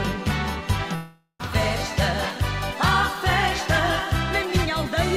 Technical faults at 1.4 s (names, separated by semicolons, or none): long network dropout